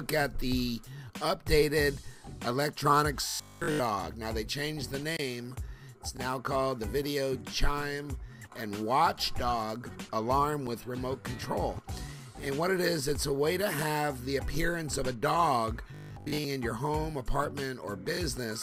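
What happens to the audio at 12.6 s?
Nothing goes wrong at 12.6 s; the audio runs on intact through that moment with no fault to be heard.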